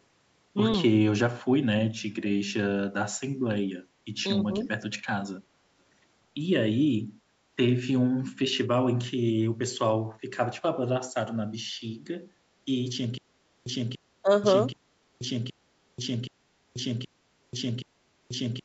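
From 4.47 to 4.66 s the sound dips by about 5 dB across roughly 150 ms, the kind of brief gain drop left by speech suppressed in double talk, likely because the echo canceller heard both sides at once and turned everything down. On a waveform the envelope sags briefly.

Overlapping the end of that dip, at 4.60 to 4.64 s, a faint echo leak appears: a copy of the earlier sound delayed by 287 ms, about 35 dB below the speech. It is likely residual loudspeaker pickup that the canceller failed to remove. A spectrogram would show a weak ghost of earlier harmonic traces, shifted later in time.

From 13.18 s to the end, the audio falls into a stutter with silent gaps, likely from a stalled stream replaying its last fragment on each retry. A 289 ms burst plays, then about 485 ms of digital silence follows, giving a 774 ms cycle that repeats 7 times. The waveform becomes identical blocks separated by near-flat lines. 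The spectrogram shows the same patch copied at even spacing with blank columns in between, and nothing above 8 kHz anywhere.

Inside that loop, from 14.22 to 14.30 s, a second double-talk dip cuts deeper, about 15 dB over roughly 70 ms. It appears as a sharp notch in one burst's envelope.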